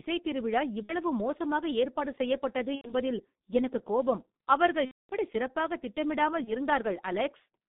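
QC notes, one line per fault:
Throughout: G.723.1 codec at 6.3 kbit/s, band-limited to about 150 Hz to 3.7 kHz. The coarse, slowly updated vocal model makes the speech muffled and hoarse, with smeared consonants. A spectrogram shows a hard ceiling near 3.7 kHz and blurred, blocky formant detail.
0.83–0.96 s, 2.75–2.94 s, 4.85–5.14 s, 6.44–6.53 s: VoIP packet loss concealed by the speech codec. Gaps of 60, 90, 240 and 30 ms, fitting runs of one to eight 30 ms frames, are filled by a decaying extrapolation of the last pitch and filter. A spectrogram shows a frozen, repeating spectrum, and the waveform shows a tapering envelope before the speech recovers.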